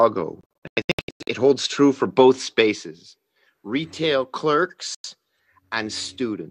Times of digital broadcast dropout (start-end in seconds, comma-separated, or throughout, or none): 0.41-1.28, 4.95-5.05